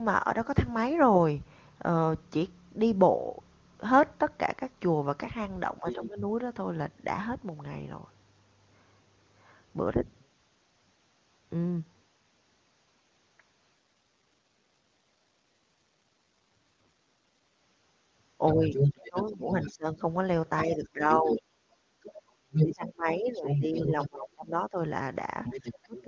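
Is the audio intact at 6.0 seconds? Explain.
No. From 5.80 to 6.22 s the talker's speech dips by roughly 10 dB and breaks up for about 300 ms in all. This is speech suppressed in double talk: with both sides talking at once, the echo canceller likely couldn't tell the talker from loudspeaker echo and turned everything down.

Inside that stretch, from 5.89 to 6.06 s, a second voice sits roughly 10 dB below the talker. That is the other side's voice leaking through, likely because the echo canceller left some loudspeaker playback in the microphone signal.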